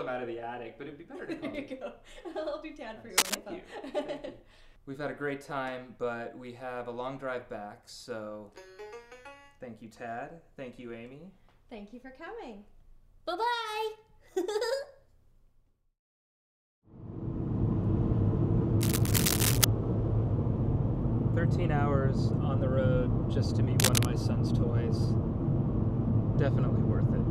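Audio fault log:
3.18–3.35 s, 18.81–19.65 s and 23.80–24.05 s, cable scratch noise: short bursts of dense, ragged scratching on top of the sound, a bit louder than it in the first burst and about level with it after. A worn cable or connector being moved is the likely culprit.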